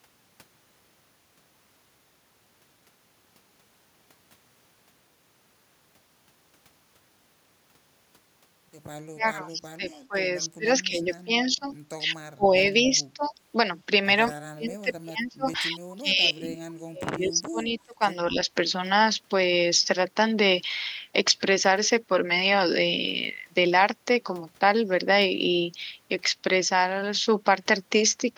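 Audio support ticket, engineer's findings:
Speech suppressed in double talk: the near talker dips or drops out in chunks, at 9.12–10.16, 10.48–11.66, 11.98–12.53, 12.90–13.36 and 14.51–18.37 s. It's worst in that last stretch, up to about 30 dB down. Likely the echo canceller can't tell our talker from the far-end echo and ducks both.

Echo leak: a faint delayed copy of the voice, about 35 dB under the speech, at 9.91–10.01 s, trailing by 214 ms. Likely the far end is on a loudspeaker and its canceller let a scrap of echo through back to us.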